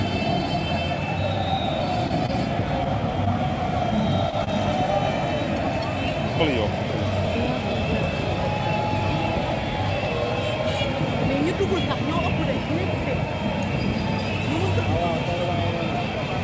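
A packet arriving late left the jitter buffer empty twice, at 2.08 to 2.12 s and 4.44 to 4.49 s. Each time the receiver held the last sound for about 22 ms and 30 ms until the packet turned up, then carried on with nothing lost. This short stall from a late packet is heard as a briefly prolonged sound with a faint buzz or dip. In short concealed packet loss, about 20 ms of audio failed to reach the decoder at 2.26 to 2.30 s, 3.25 to 3.28 s and 4.30 to 4.34 s. The receiver filled each gap by extending the preceding sound before blending back, which leaves a small smear or wobble where a brief sound may drop out. The audio passed through a call path with nothing above 8 kHz, which fits a G.722 codec at 64 kbps.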